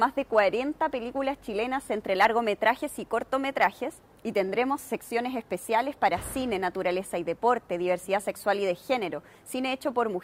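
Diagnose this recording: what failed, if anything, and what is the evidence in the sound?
No failure can be heard.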